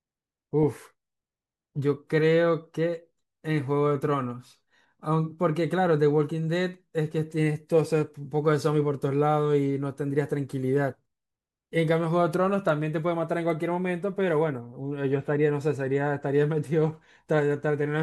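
There are no technical faults to describe, so there is nothing to set out in time order.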